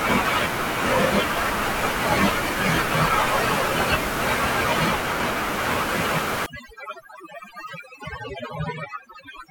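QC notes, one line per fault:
6.46–9.50 s, overdone noise removal: from 6.46 s to the end, the room noise, about 13 dB below the speech earlier, drops and breaks up into twinkling specks. A noise reducer set far too strong pushes each frequency band down whenever it sits near its noise estimate, taking quiet parts of the speech with it. A noise gate would mute everything at once. This works band by band, which leaves the scattered specks.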